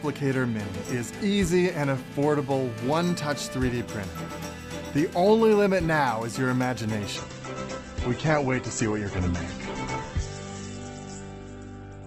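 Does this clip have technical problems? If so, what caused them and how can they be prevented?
Yes. From 1.36 to 2.32 s, GSM signalling bursts from a nearby 2G phone, rectified by the audio circuit, gallop as ticks and brief 217 Hz buzzes, roughly 25 dB down; a spectrogram shows clustered harmonic stacks. Keep phones away from cables and inputs.

From 2.33 to 3.15 s, a steady GSM phone buzz at 217 Hz, about 26 dB below the signal, appears on a spectrogram as dense evenly spaced harmonic lines. Use shielded, well-grounded cabling.

From 7.16 s to the end, the adaptive stream plays at a lower bitrate, consistent with a drop from about 64 to 12 kbit/s Opus; a spectrogram shows a sudden flat ceiling at 8.2 kHz. Ensure stable bandwidth or buffer more.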